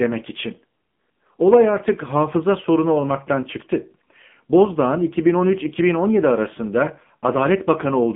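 AMR narrowband mobile codec damage runs through the entire clip. The speech is held to a phone band of 150 Hz to 3.5 kHz, nothing above 3.7 kHz, and sounds heavily buzzy and synthetic, rebuilt from a sparse vocal-tract model. This fits AMR-NB near 6.7 kbps.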